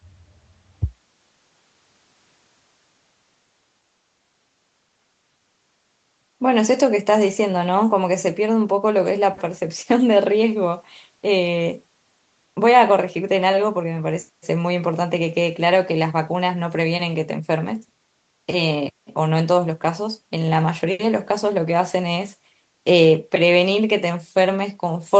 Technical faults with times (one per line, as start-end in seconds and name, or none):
none